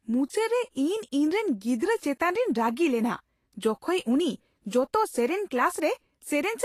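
A speech recording carrying plainly audible Vorbis compression damage for its whole length, likely from encoding at a low bitrate around 36 kbps. The treble sounds hissy and grainy, with roughened tones and softened consonant attacks. A spectrogram shows a hard ceiling at about 14.2 kHz, with the band beneath it broken into speckled, noise-like patches.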